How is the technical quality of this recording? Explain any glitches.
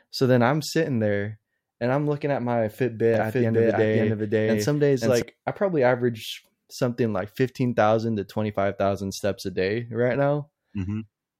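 A doubled audio track runs from 3.14 to 5.22 s, after "I'm looking at my" and ending before "I probably average something". The speech is mixed in a second time, most likely because a slower capture path or an edit left two copies out of step. The copy trails by about half a second at roughly the same level, with no decay or room colour, so every syllable comes back as a clean echo, and the doubling starts and stops abruptly.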